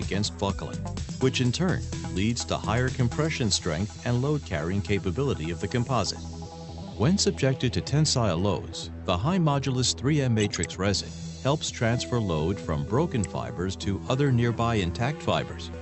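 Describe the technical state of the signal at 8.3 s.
At 8.3 s the audio is intact, with no fault at that moment beyond the ordinary character of a call codec carrying the sound with its top end limited to about 8 kHz.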